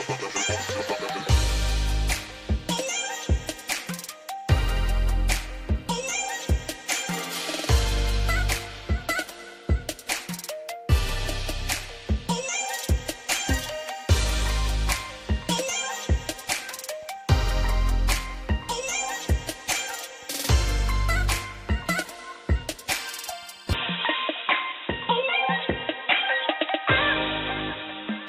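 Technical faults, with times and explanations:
23.73–28.29 s, input switched to a poorer device: the recording likely moves mid-stream onto a lower-grade input, such as a different microphone or a headset's call profile, and stays there to the end. That device passes nothing above 3.8 kHz, so the sound abruptly turns dull and boxy with no gap at the change. Level stays about the same, but a new background noise appears, sitting roughly 40 dB below the signal.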